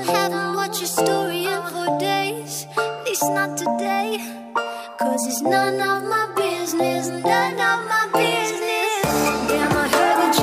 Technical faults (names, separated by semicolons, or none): none